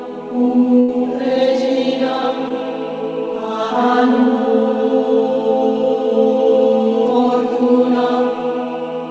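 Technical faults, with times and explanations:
0.80–0.90 s, burst of packet loss: the last sound is stretched into a fading buzz or hiss, because the receiver extrapolated over about 80 ms of audio that never arrived.
2.48–2.52 s, short concealed packet loss: a brief smear or wobble, as the receiver filled a missing 20 ms stretch by continuing the previous sound, then blended back.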